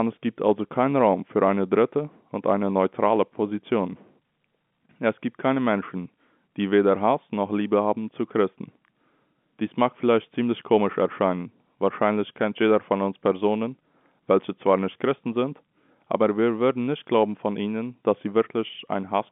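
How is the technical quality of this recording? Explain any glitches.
There are no glitches to explain here.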